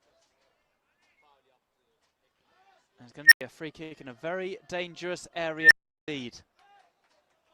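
At 3.25 s an unstable filter, a recursive filter whose feedback coefficients drove its output to grow without bound, makes a tone around 2 kHz swell for about 64 ms until it clips, then overflows and drops out for about 93 ms. It happens again at 5.60 s, building over 112 ms before a longer 372 ms silence ending near 6.08 s. At 3.83 s there is a short stall from a late packet. The jitter buffer emptied and the receiver stretched the last sound for 76 ms until the packet arrived, so nothing is lost, but the sound hangs unnaturally until 3.92 s.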